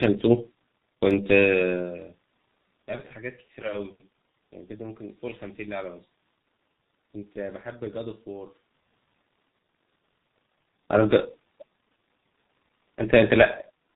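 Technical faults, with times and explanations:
throughout: G.723.1 codec. The speech is muffled and hoarse with smeared consonants, which fits heavy low-bitrate telephony coding near 6.3 kbit/s that removes everything above 4 kHz.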